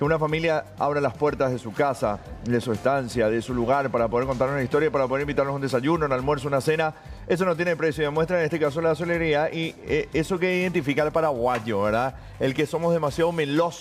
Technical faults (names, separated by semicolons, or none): crude rate conversion